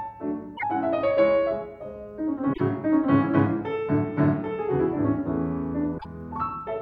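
At 0.54, 2.50 and 5.94 s the audio breaks up briefly, lasting about 0.1 s each time, the mark of damaged data in a compressed stream. The decoder meets corrupted frames, misreads them and hunts for the next valid frame header before resuming. Unlike a plain dropout, which leaves silence, or a click, which is a single sharp tick, these bursts come from the decoder losing its place in the stream.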